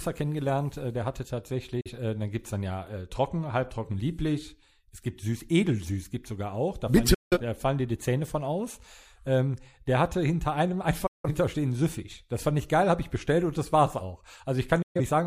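Digital broadcast dropouts at 1.81–1.91 s (after "kennengelernt äh der hatte"), 7.14–7.38 s (before "die da fallen dir"), 11.06–11.28 s and 14.82–15.00 s (after "und das war's auch"). Each time the receiver loses valid frames and mutes with an 8 ms fade. The result is a short silent hole in the speech, and the audio in that gap is lost. The hole lengths point to one, four, four and three lost frames of about 43 ms each.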